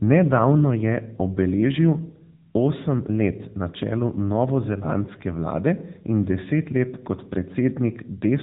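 From start to end, the AMR narrowband mobile codec limits the speech to nothing above 3.8 kHz; plainly audible buzzy, synthetic coding fits a low bitrate near 8 kbps.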